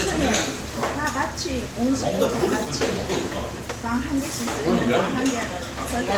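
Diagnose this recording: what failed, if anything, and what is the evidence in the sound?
Nothing in this recording stood out as a failure on listening.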